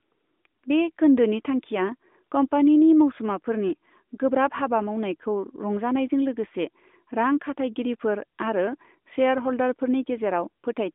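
No faults are audible anywhere in this speech clip.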